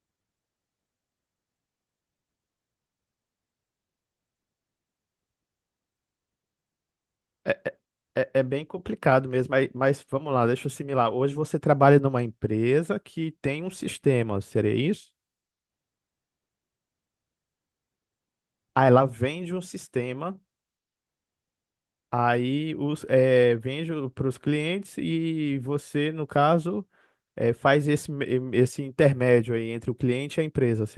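No technical faults are audible.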